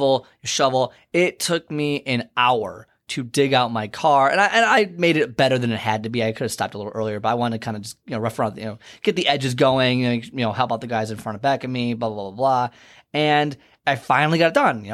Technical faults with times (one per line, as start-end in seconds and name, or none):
none